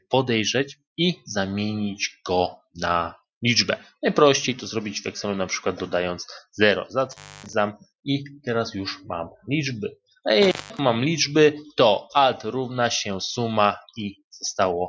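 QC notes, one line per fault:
7.05–7.55 s and 10.42–10.79 s: intermittent contact. The signal drops out twice, for about 280 ms and then about 190 ms. Crackle marks both edges of each gap. A loose plug or cable is briefly losing contact, so the audio path opens and the sound vanishes. The scraping at each edge is the contact breaking and remaking. While the line is open, little is left but faint hiss, all within the call band that ends at 8 kHz.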